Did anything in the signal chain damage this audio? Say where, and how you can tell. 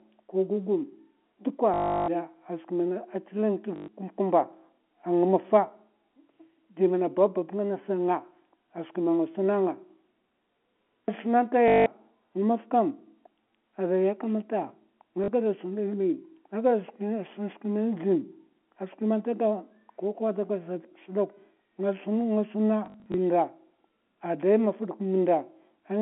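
Yes, at the network stage: packet loss with the last packet repeated. The stutters fall at 1.74–2.08 s, 3.76–3.88 s (just before "kumb'kumba a"), 11.68–11.86 s, 15.24–15.28 s, and scattered 22.86–23.14 s with runs of up to 40 ms. The receiver looped its last packet, so the longer runs buzz near 50 Hz, which fits 20 ms packets. A dropout would go silent instead. The G.711 narrowband line itself is clean.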